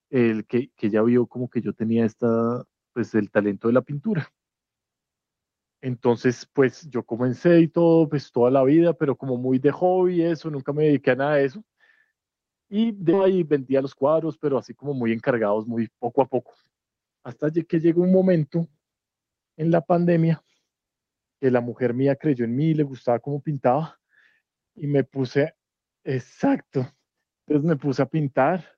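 At 13.13 s the speech skips ahead. About a second of audio was dropped while later audio waited, so playback jumps forward with no gap. Then comes a jitter buffer speed-up from 13.19 to 15.77 s. The receiver trimmed short pitch-period pieces, removing roughly 0.4 s. The speech runs at 116 percent at the same pitch and sounds hurried.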